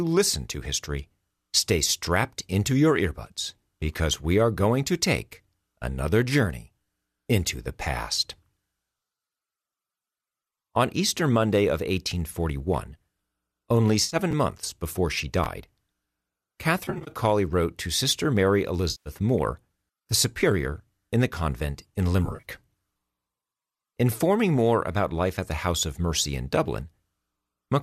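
From 14.04 to 14.16 s there is AAC frame loss with concealment. About 70 ms of audio is missing, scattered over 80 ms, with the longest gap around 50 ms. The decoder patches each gap from the last good spectrum. The result is a brief smeared, phasey blur.

At 14.31 s, just before "months before she", chunks play out of order. One 10 ms chunk arrives one chunk late and plays after its successor. Nothing is lost, but the hard joins give a tiny jumbled flick. The same fault recurs at 15.44 s, just after "months before she".

Concealed frame loss returns three times. From 16.85 to 17.11 s, just before "wrote to", 150 ms is lost across 220 ms in short runs of up to 30 ms. From 18.91 to 19.10 s, another 150 ms goes missing. From 22.25 to 22.45 s, 110 ms is lost across 180 ms. Each gap is filled with noisy, smeared spectrum. The losses would fit 10 ms frames.

A light graininess runs through the whole clip. 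This is likely the low-delay AAC compression at 64 kbps, with its short frames resolving harmonics less finely.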